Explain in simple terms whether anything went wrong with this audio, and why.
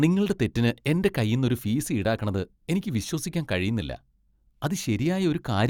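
Nothing went wrong with this speech recording. At no point does the sound misbehave in a way that would point to a technical problem.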